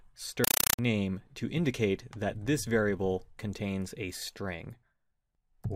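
Compressed stream played as audio from 0.44 to 0.79 s: harsh, loud static bursts repeating 31 times a second replace the sound, consistent with undecoded AC-3 data read as samples.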